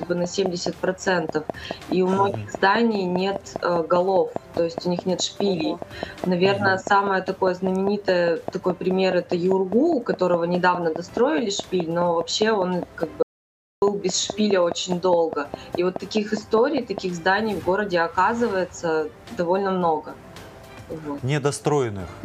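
A regular train of clicks ticks over the sound from 0.03 to 16.99 s, about 4.8 per second, around seventy in all and well above the signal, likely interference or a faulty connection. At 13.23 s there's an audio dropout to silence lasting about 0.59 s, until 13.82 s. The gap is silent with no room tone, most likely a momentarily lost input or link.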